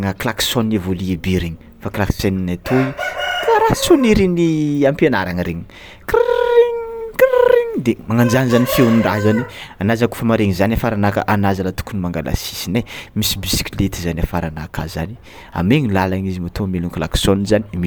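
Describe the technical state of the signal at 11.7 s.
At 11.7 s the speech signal is intact, with no audible technical fault at that moment.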